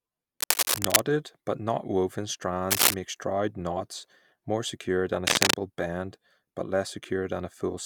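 Cable scratch noise interrupts the speech three times, at 0.40 to 1.02 s, 2.71 to 2.94 s and 5.27 to 5.56 s, as rough scratching a little louder than the speech. A worn connector being moved is the likely cause. Spectrograms show ragged broadband smears, and waveforms show dense jagged bursts.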